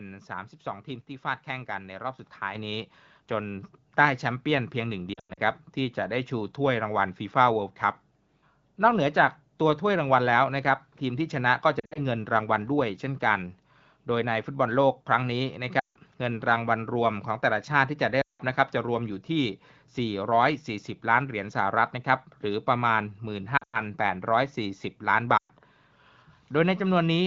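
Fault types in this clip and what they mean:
Microphone volume stepped up: at 2.55 s the input level jumps by about 7 dB in one step, so the voice and the background noise both get louder together. This is what happens when call software decides the microphone is too quiet and raises its gain.
Lost AMR speech frames: six brief breakups occur at 5.14, 11.79, 15.79, 18.21, 23.58 and 25.38 s. Each lasts between 120 and 180 ms in total. The decoder repeats the last good sound with falling level, dropping to near silence within two frames until the frames resume, and the longest single run is 180 ms.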